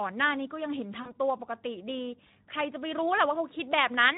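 Right from the start the whole clip carries Speex codec damage, and it's plainly audible. The speech has that hoarse, noisy texture you get when a CELP coder is starved of bits for the excitation, and the sound points to a setting around 11 kbps. At that rate the model can't rebuild the fine detail of the waveform, so the voice sounds grainy and a bit synthetic all the way through.

Then, from 1.01 to 1.16 s, there's VoIP packet loss concealed by the speech codec. About 40 ms of audio went missing, which fits two lost 20 ms frames. The decoder covered the gap by stretching its last pitch and filter forward and turning the gain down each frame, so you hear a short smear that fades. Because each frame builds on the one before it, the voice stays weak and off for a moment after the stream comes back, and that tail is why the disturbance runs longer than the actual loss.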